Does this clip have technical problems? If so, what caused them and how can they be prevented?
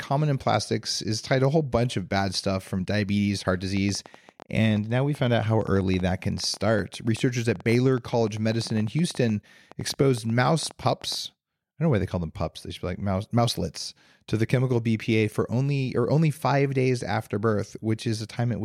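Yes: after "stuff from diabetes heart" there's a train of clicks from 3.77 to 11.16 s, about 70 irregular ticks, roughly 11 per second, as loud as the speech. It's likely interference from nearby gear or a faulty connection or power supply. Keeping phones and power supplies away from the cables and using a solid interface should prevent it.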